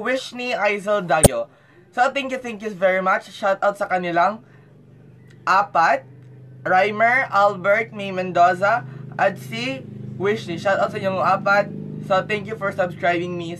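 At 1.23 to 1.27 s the audio breaks into a brief glitch lasting about 36 ms. This is damaged data in a compressed stream: some of the encoded bytes there are wrong, so the decoder misreads those frames, loses sync and hunts for the next valid frame header before normal playback resumes. On the waveform it shows an abrupt discontinuity at both edges.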